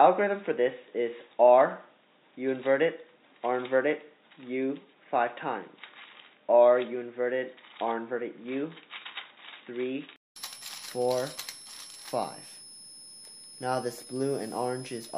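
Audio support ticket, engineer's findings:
Switching supply whistle, throughout: steady high tone near 5 kHz, wandering 4.97 to 5.38 kHz, about 20 dB under the signal; power supply running in audible burst mode or beating with another supply.

Input switched to a poorer device, 0.0 to 10.36 s: nothing above 3.8 kHz, extra noise around 45 dB down, likely a narrowband input. 200 ms gap at 10.36 s, then full band returns, level shifting around 5 dB.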